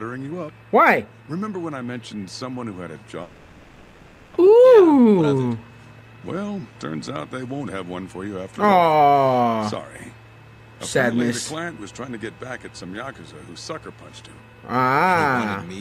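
At 3.23 s the audio gives way to a smeared, buzzy continuation of the last sound that fades down and stays low until about 4.37 s. There's no hard silence, just that filler for roughly 1.1 s. When the real audio returns, about 0.6 s of material is simply gone. That's most likely a long network dropout, with the receiver concealing the gap and delay building up by around half a second. Right after, from 4.40 s to 6.73 s, you get the jitter buffer speed-up: the receiver trims tiny pitch-period-sized slices over and over to burn off that extra half second or so, so the audio plays at about 121% speed. The pitch stays put, but it sounds noticeably rushed until it settles.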